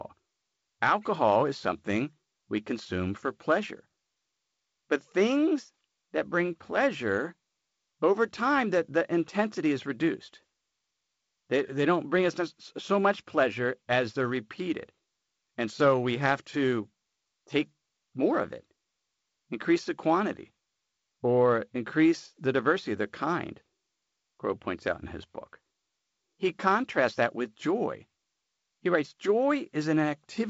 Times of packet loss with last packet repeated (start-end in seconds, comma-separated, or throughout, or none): none